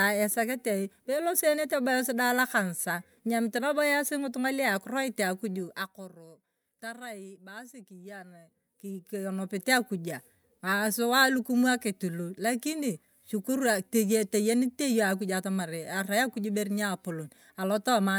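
No technical faults can be heard anywhere in this speech.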